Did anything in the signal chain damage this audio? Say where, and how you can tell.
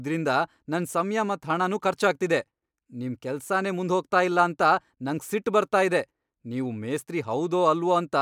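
No, nothing in the signal chain damaged this speech.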